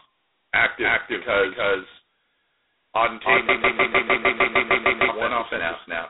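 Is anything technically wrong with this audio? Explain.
Yes, there are three problems. The whole clip is heard twice: a second full-band copy sits roughly 300 ms behind the first at about the same level. There's no decay or room tone on it, so it isn't an echo. It's a doubled audio track, likely from the signal being picked up a second time over a slower path.

The sound is also squeezed into a telephone band, roughly 250 Hz to 3.7 kHz, with nothing above 3.9 kHz. It carries a harsh, rasping hiss that rises and falls with the speech. That fits heavy G.726 ADPCM coding at its lowest 16 kbit/s rate, where each sample gets only a couple of bits of prediction difference.

From 3.49 to 5.09 s there's a broken-record loop. A fragment of about 0.15 s repeats exactly, back to back, ten times, and whatever should have played in that stretch is gone. That points to a stalled player or stream that kept resending the last piece it held.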